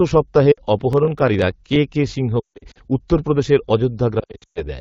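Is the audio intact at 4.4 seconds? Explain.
No. From 4.20 to 4.66 s the sound breaks up with brief dips and warbles, and in the longest gap, about 120 ms, it drops to near silence within two frames before recovering weak or rough. These are lost AMR speech frames: corrupted frames failed their checks, so the AMR-WB decoder kept repeating the last good pitch and vocal tract settings at falling gain. Roughly 280 ms went missing across a 360 ms stretch, consistent with about fourteen 20 ms frames.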